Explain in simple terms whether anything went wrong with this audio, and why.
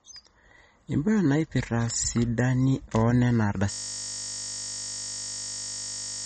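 Two things went wrong. Throughout the speech, the sound is dull and plainly watery, as if heard through a thin wall. Nothing above about 8.4 kHz gets through, so the crisp top of s and t sounds is missing, and swirling or chirping clings to the voice. The likely cause is heavy MP3 compression. To save space, the encoder cut off the highest treble and discarded quieter detail, and that detail flickers in and out from moment to moment.

At 3.72 s the speech stops and turns into a steady, rough buzz that lasts to the very end. That is a system hang loop. The computer froze, but the sound hardware kept replaying the last 20 ms of audio it had been given, over and over, well over a hundred times. Because the same tiny piece repeats 50 times a second, you hear it as a low buzz rather than as a stutter.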